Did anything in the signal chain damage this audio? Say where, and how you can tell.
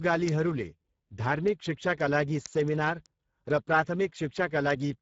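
Yes. A hoarse, noisy speech texture runs throughout, with nothing above about 7.7 kHz. The codec stage did this: a low Speex setting, which fits roughly 10 kbps.

Sharp ticks repeat about every 70 ms from 0.13 s to 5.01 s. These are word clock ticks from an unlocked digital interface, where clocks a few hundred ppm apart slip one sample each time.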